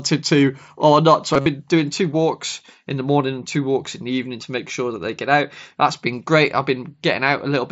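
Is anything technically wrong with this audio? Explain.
Yes. From 1.34 to 1.46 s, just before "doing two walks in", there is concealed Bluetooth headset packet loss. Lost packets were patched by repeating recent waveform, giving a brief buzzy hold, longest about 50 ms, then a warble.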